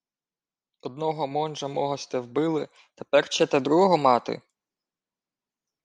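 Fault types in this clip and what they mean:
Drift correction step: from 2.59 s to 5.08 s the speech runs about 5.7% fast, with pitch raised by roughly 96 cents, close to a semitone, and then it snaps back to normal rate and pitch. Speed and pitch move together and the change is abrupt, likely caused by clock-matching software stepping the playback rate to refill or drain its buffer, not by any change in the source itself.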